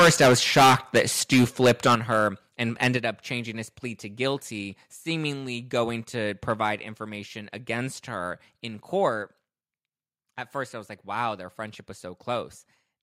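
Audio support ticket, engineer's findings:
Harsh, crackling distortion on loud syllables, 0.00 to 1.02 s, 1.32 to 2.18 s, 2.82 to 2.87 s. Worst at start, peaks about 16 dB over, roughly a fifth of samples flattened. Likely microphone overload: input gain too high, converter clipping peak tops.

Sudden level drops in speech and background at 1.95, 2.97, 7.05, 9.09 s. Steps about 7, 5, 2, 2 dB. First two follow clipped peaks. Likely microphone volume stepped down by call software reacting to overload, cutting device input gain.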